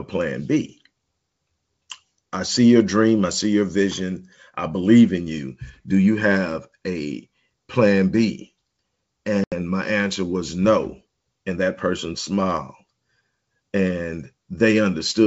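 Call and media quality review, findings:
Packet loss on ADPCM call, 9.44–9.52 s: about 80 ms of packets dropped, consistent with a few consecutive packets lost. Receiver concealed with silence, so the sound cuts to a hard-edged hole. The decoder's predictor and step size then lag the sender's, so "my answer was no" resumes with brief distortion until it re-converges. G.722 path at 64 kbit/s is clear to 7 kHz with faint upper-band hiss.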